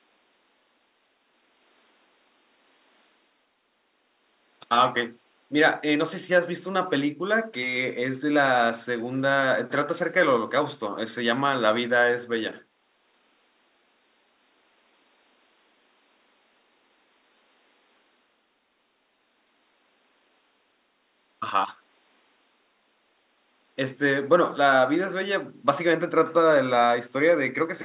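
No technical faults occur anywhere in the speech.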